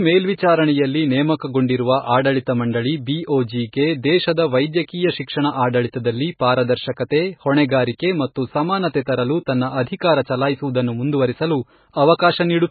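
Throughout the speech, nothing is heard above 4.5 kHz. Heavy damage swirls and smears the sound. This is likely MP3 compression, starved at a bitrate near 16 kbps. The encoder cut the treble and dropped weak frequency lines, which flicker between frames.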